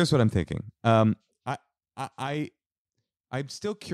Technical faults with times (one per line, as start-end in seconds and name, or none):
1.03-1.61 zipper noise